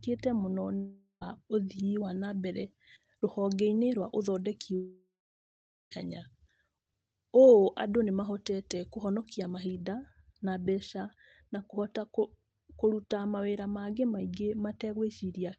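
From 0.75 to 1.23 s the sound breaks off for about 0.46 s. The last sound is stretched into a fading buzz, then about 0.09 s of silence before the audio resumes with that stretch missing. The likely cause is a long network dropout.

From 1.76 to 9.75 s, pre-emphasis is left on. A 75 µs FM-style treble boost was applied and never undone, lifting 10 kHz by about 13 dB relative to 1 kHz. The speech sounds thin, bright and sharply sibilant.

Inside that span, from 4.75 to 5.93 s, a second gap removes about 1.16 s of audio. The concealment buzz fades and leaves about 0.8 s of silence before the speech picks up further on, again likely from a long network dropout.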